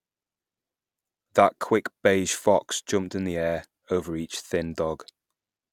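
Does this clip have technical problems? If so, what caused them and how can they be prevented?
No, there are no technical problems to point to in this speech clip. With no fault present, there is no cause to trace and nothing that needs preventing.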